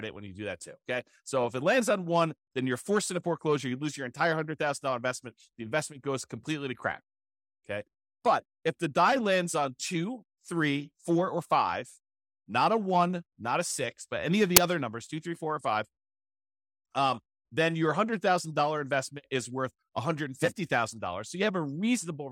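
A block of file metadata, in this case the compressed data of an embedded cover picture, has been read out as though it were audio samples, the fault known as file tags played as audio. In this speech clip it surfaces at 14.57 s as a very brief burst of very loud white noise with hard edges. Because compressed image bytes are essentially random, they decode as loud broadband static rather than any tone, cutting abruptly in and out.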